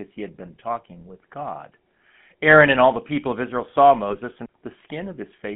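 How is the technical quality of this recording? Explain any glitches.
The technical quality is poor. The speech has been through a low-bitrate phone codec, and there is one brief dropout near the end.

GSM full-rate codec, throughout: The voice was rebuilt from a vocal-tract model driven by a regular pulse train, at what sounds like the 13 kbps full-rate coder. The band runs only from about 150 Hz to 3.4 kHz, so the speech is thin and boxy. The coarse excitation gives it a plainly audible buzzy, gravelly roughness.

Lost GSM frames, 4.08 to 4.16 s: The decoder hit a bad frame and filled the gap by reusing the previous good frame's settings. The gap fits a single lost 20 ms frame. It is heard as a short rough, metallic ring that smears the speech there rather than a clean silence.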